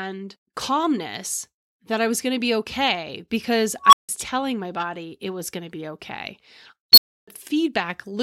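At 3.82 s a beep around 1 kHz swells over about 100 ms into a loud, clipped squeal, then drops into 160 ms of silence before the speech returns at 4.09 s. At 6.93 s a higher squeal around 4 kHz does the same, peaking within 50 ms and followed by 300 ms of silence until 7.28 s. Both are an unstable filter: a recursive filter's feedback amplified its own output until the values overflowed, muting the sound until it reset.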